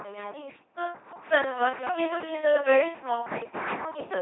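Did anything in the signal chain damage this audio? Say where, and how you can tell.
Yes. The damage comes from the codec stage, and it runs through the whole clip. This is speech passed through an LPC-10 vocoder. The voice sounds buzzing, mechanical and robotic throughout. Nothing is left above 3.8 kHz. The damage is heavy. A filter of up to ten poles shapes either a pulse train or noise, so each moment is forced to be fully voiced or fully unvoiced. Natural texture is lost. The sound fits a 2.4 kbit/s budget.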